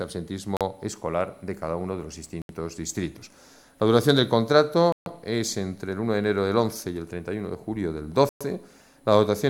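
Bluetooth stalls at 0.57 s, 2.42 s, 4.92 s and 8.29 s drop the audio to silence for 39, 74, 138 and 115 ms before it resumes, likely because interference delayed packets and the headphone buffer ran empty until retransmissions arrived.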